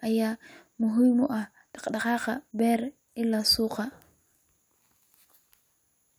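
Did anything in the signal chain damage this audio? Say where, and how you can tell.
No, nothing damaged this audio.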